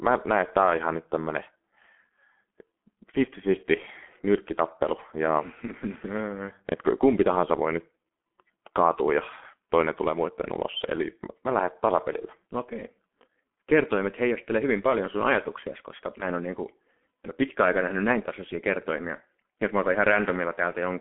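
A speech recording carries the G.723.1 codec throughout. Nothing sounds above 3.8 kHz, and the band sits near 200 Hz to 3.4 kHz, so the speech is muffled. Heavy damage leaves it hoarse with smeared consonants, which fits a bitrate of about 6 kbit/s.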